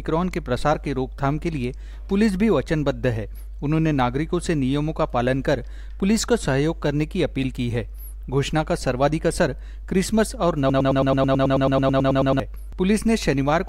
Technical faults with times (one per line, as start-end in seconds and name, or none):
10.70-12.40 broken-record loop